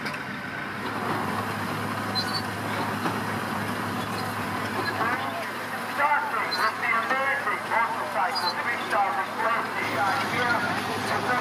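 Nothing stood out on listening to this recording.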